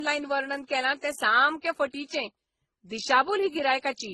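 From start to finish the speech has two layers of codec damage stacked together: smeared, swirly artefacts from one coder plus a second coder's grainy texture, with nothing above 19.8 kHz. That's likely transcoding between lossy codecs, consistent with low-rate MP3 re-encoded to Opus.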